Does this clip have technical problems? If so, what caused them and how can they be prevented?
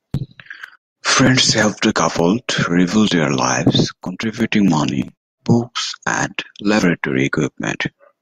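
No, the recording shows no technical problems, and its signal chain holds steady throughout the speech with nothing audible that points to a fault.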